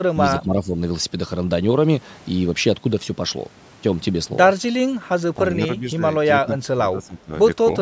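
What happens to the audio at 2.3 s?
Nothing goes wrong at 2.3 s; the speech there is intact, carried through ordinary call microphone processing with no fault at that moment.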